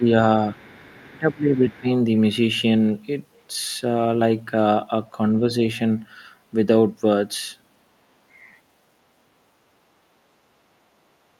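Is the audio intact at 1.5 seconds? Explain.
No, 1.5 s falls inside a stretch of speech suppressed in double talk, running from 1.01 to 1.87 s. The speech gets pushed way down, something like 25 dB at its deepest, for most of that span. Likely an echo canceller clamping both sides while they overlapped.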